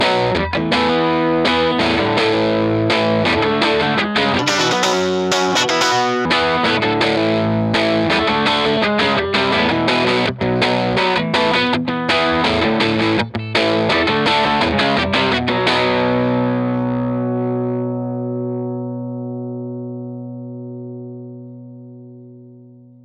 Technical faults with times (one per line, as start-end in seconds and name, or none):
4.39-6.25 wrong sample rate